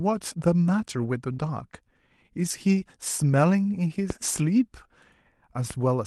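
At 1.02 to 1.04 s a single 20 ms stretch of the speech turns briefly rough and grainy without any break in continuity: a lost packet rebuilt from error correction. The packet never arrived, so the decoder played the low-bitrate copy carried in the next one. On a spectrogram that frame looks smeared and noisier, with fine harmonic detail blurred. In the waveform the envelope carries straight through, with no dropout.

From 1.32 to 1.40 s comes a burst of packet loss. For about 58 ms the receiver extends the last sound it had, fading it down. It then resumes about 60 ms further on, with that part missing. A spectrogram shows the frozen last sound dimming into a hard resumption. The waveform shows the extended sound shrinking in amplitude, then a jump.

Three more packets are rebuilt from error correction at 1.42 to 1.44 s, 1.46 to 1.48 s and 1.72 to 1.74 s. Each is a short 20 ms patch of coarser, hissier sound with no gap. 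The call codec's usual band limit, which points to roughly 12 kHz, sits above these patches throughout.

At 4.10 s a loud pop lands on top of the speech. Its peak is about 15 dB above the signal, and it lasts around 35 ms while the speech continues underneath. It is likely a voltage step from a plug, switch or static discharge. The waveform shows a tall isolated spike. On a spectrogram it is a bright vertical line spanning all frequencies. A second, single loud pop follows at 5.71 s, about 10 dB above the signal, with the same sharp thump and full-band stripe.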